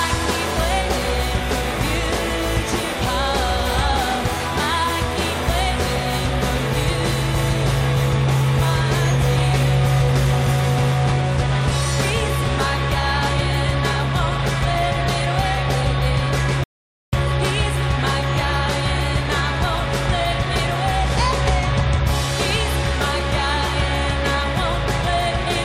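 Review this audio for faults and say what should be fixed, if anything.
Rebuffering stall, 16.64 to 17.13 s: playback drained its downloaded audio, fell silent for 0.49 s, then resumed exactly where it stopped, losing nothing but adding time.

To prevent it, buffer more audio ahead of the playhead and use adaptive bitrate so delivery keeps pace with playback.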